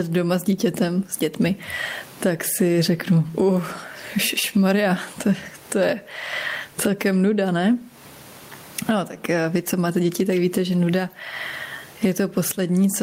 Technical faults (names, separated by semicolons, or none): gain pumping